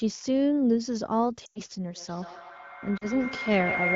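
At 1.45 s the speech smears for about 0.15 s, which fits roughly five lost AMR speech frames. Radio errors corrupted them, so the decoder kept repeating the last good pitch and vocal tract settings at falling gain. The result is a quick fade to near silence within two frames, and the repeated settings at falling gain are what separate it from a plain dropout. The wideband decoder, running at 15.85 kbit/s, pulls the sound down quickly, and the speech returns thin and rough for a moment.

From 1.95 s to the end of the clip a feedback howl builds. Two devices on the same call in one room form a loop: the microphone picks up the loudspeaker, and each trip adds gain. The repeats therefore grow instead of dying away and narrow onto a tone around 2 kHz. The loop's delay is roughly 150 ms, and the howl peaks about 3 dB below the speech. The steady growth distinguishes it from a fixed whistle or an electrical hum.

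At 2.97 s a second, shorter run of lost AMR speech frames lasts 40 ms, consistent with two frames. This time the concealment again drops the sound to near silence within the two frames.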